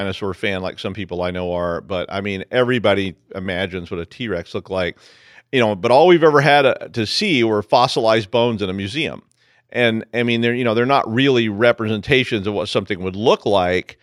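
Nothing goes wrong anywhere in this recording of speech, so there's no technical fault to point to at any moment.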